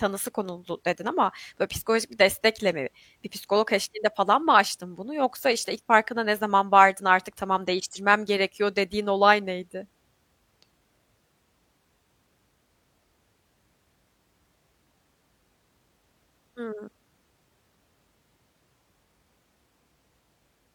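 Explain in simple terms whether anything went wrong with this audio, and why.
Nothing went wrong with this speech recording, and no technical fault can be heard anywhere in it. There is nothing here that needs fixing.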